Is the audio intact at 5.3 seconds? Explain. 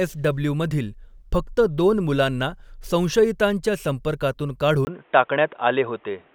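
No. From 4.85 s to the end of the clip, the input likely switched to a poorer device, such as another microphone or a headset's call profile. After a brief gap of about 20 ms at 4.85 s, the speech loses everything above 3.8 kHz and sounds dull and boxy. Its level shifts by about 5 dB, and a new background noise sits roughly 40 dB beneath the speech, so at 5.3 s the audio is degraded.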